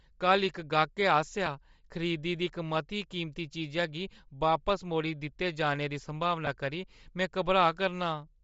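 A low-bitrate transform codec, likely Bluetooth LC3 compression, runs through the whole speech clip. Much of the upper spectrum is discarded and refilled with shaped noise, giving the voice a plainly audible breathy, grainy edge, which fits LC3 at about 32 kbps with short frames.

Lost LE Audio frames occur at 1.46 s and again from 6.45 to 6.48 s. The decoder covers each gap by replaying the previous spectrum with scrambled phase, so the voice briefly smears into a noisy blur. The gaps fit one and then two missing 7.5 ms frames.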